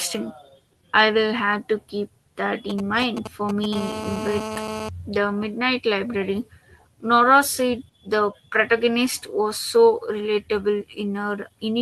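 From 2.70 to 3.75 s you get GSM signalling bursts: a nearby 2G phone is handshaking with the network, and the audio circuitry is rectifying its radio pulses into sound. It comes through as that galloping dit-dit-dit of clipped buzzes, each buzz pulsing at about 217 Hz, which is the GSM frame rate. It sits roughly 10 dB under the speech.

At 3.75 s the phone goes into a call, and the pattern turns into continuous GSM phone buzz until 4.89 s. The handset is now transmitting 217 times a second without pause, and the rectified pulses make a hard, raspy 217 Hz drone packed with harmonics. It's about 8 dB below the speech and has no relationship to what's being said, which is why it sounds bolted on rather than part of the recording.

Underneath that buzz, from 4.47 to 4.53 s, there's a short stall from a late packet. A packet was overdue, the jitter buffer ran dry, and the receiver held the last bit of sound for about 37 ms until the data showed up. 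Playback then picked up exactly where it stopped, so nothing is lost. You just hear one sound drawn out slightly too long, with a slight buzz or dip, and everything after it lands 37 ms later than before.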